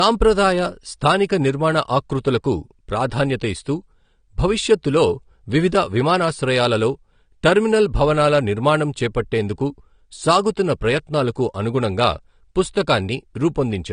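Low-bitrate audio saved at a high bitrate, likely low-rate AAC re-encoded as MP3: throughout, the speech has nothing above 9.7 kHz and sounds dull.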